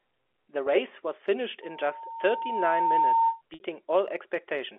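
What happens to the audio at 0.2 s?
Nothing goes wrong at 0.2 s: the speech there comes through intact, carrying only the narrow band of G.711 telephone coding, which passes roughly 300 Hz to 3.5 kHz.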